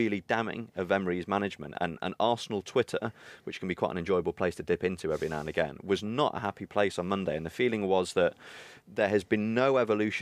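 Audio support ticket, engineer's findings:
No faults found in recording.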